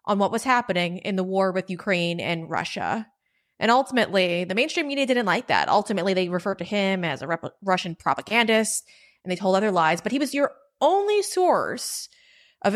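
No technical faults can be heard anywhere in the recording; the signal stays steady and intact throughout.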